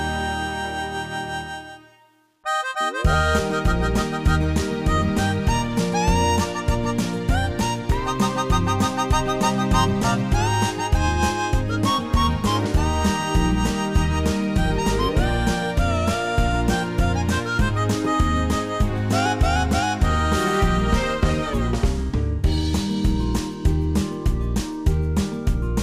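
Between 0.60 and 2.43 s the sound turns grainy, a gritty distortion that tracks the signal and is most obvious on the quieter parts, sitting roughly 50 dB down. That's low bit depth without dither, likely a 10-bit rounding step with no noise added to decorrelate the error.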